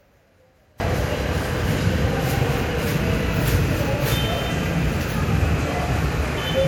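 From the start to 0.8 s the sound nearly disappears in mono, dropping by about 34 dB and leaving only a faint residue. This is most likely one channel inverted: one side's reversed polarity cancels everything the two channels share when they are summed.

Throughout the clip the audio sounds swirly, smeared and hollow, with blurred attacks and a watery, holed-out top end. The likely cause is generation loss, with the material lossily re-encoded around five times. That fits a chain of MP3 passes near 96 kbit/s, each adding fresh quantisation damage on a shifted frame grid.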